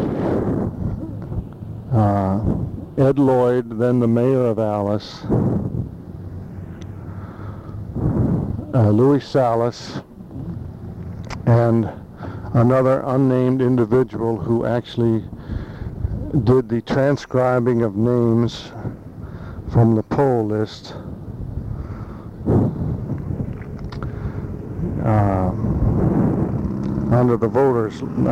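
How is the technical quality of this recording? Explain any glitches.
Listening through the recording, nothing stood out as a technical problem, so there are no glitches to explain.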